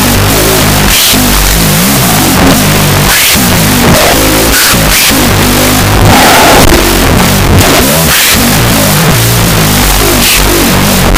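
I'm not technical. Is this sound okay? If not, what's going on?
No, there's a wrong sample width problem throughout: each original sample got split in two, so the speech plays at half speed, an octave low, buried under loud noise.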